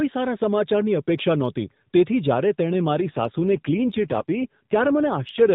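A speech clip carried over the AMR narrowband mobile codec undergoes an AMR rate drop from 3.04 s, just after "નહોતી તેથી જ્યારે તેણે", to 5.54 s. The link apparently pushes the encoder from about 12.2 kbps down to about 5.9 kbps, so the voice turns buzzier and more synthetic while keeping the same band with no gap.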